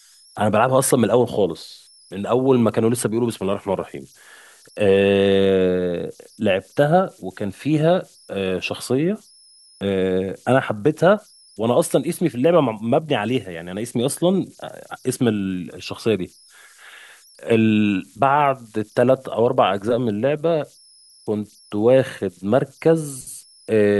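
Throughout the speech, converter idle tones sit under the recording. A delta-sigma converter running without dither has settled into repeating bit patterns whenever the input drops low, and those patterns produce a tone at around 5 kHz. It rides about 35 dB below the signal. In the pauses it comes through as a high whistle, and under quieter passages it turns into a grainy, gritty layer beneath the voice.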